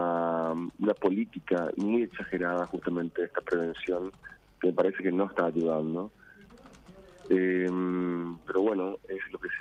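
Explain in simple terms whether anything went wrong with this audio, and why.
Nothing went wrong with this audio: no faults can be heard anywhere in it.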